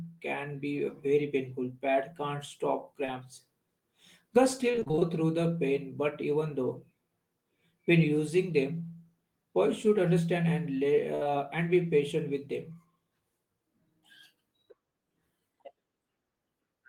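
At 3.05 to 3.10 s there is a brief smear in the speech, a short concealed packet loss. About 20 ms of audio never arrived in time, and the receiver bridged it by extending the preceding sound before blending back into the real signal.

From 4.72 to 5.03 s, just before "through the pain but", the speech turns choppy and robotic. This is repeated packet loss: eight separate gaps, none longer than about 28 ms, each patched by continuing the last sound, so roughly half of that stretch is synthesised fill.

At 11.15 to 11.23 s, after "should understand and lay", the sound holds and fades as a burst of packet loss removes about 60 ms. The decoder stretched the last sound while lowering its level, so that portion of speech is simply missing. A further short concealed packet loss follows immediately at 11.23 to 11.27 s, filling about 20 ms more before "and be patient with" resumes.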